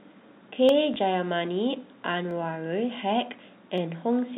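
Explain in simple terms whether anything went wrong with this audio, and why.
Yes, a few things went wrong. Three single sharp clicks break into the speech at 0.69, 2.31 and 3.78 seconds. Each is most likely dropped samples: a tiny slice of the recording, a fraction of a millisecond, went missing, so the sound wave suddenly jumps from one point to a later one. That gap is far too short to lose any speech, but the abrupt jump is heard as a click.

Between 0.94 and 0.96 seconds there is a small blip. This is packet loss with the last packet repeated. The audio travels in small 20-millisecond chunks, and one chunk never arrived. To fill the gap, the receiver played the previous chunk again. The repeated piece doesn't join smoothly with the sound around it, so it comes out as a short mechanical hiccup. The telephone-style coding itself carries the speech with little or no audible damage, leaving its usual narrow, phone-like sound.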